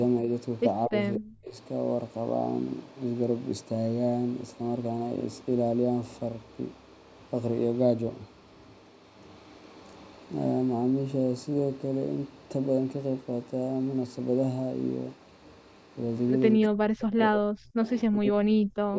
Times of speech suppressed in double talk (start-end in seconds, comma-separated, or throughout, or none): 0.87-1.57, 16.56-18.96